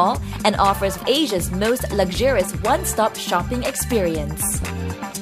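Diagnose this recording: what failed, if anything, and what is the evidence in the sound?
Nothing in the recording points to a failure at any stage, so there's nothing here to diagnose.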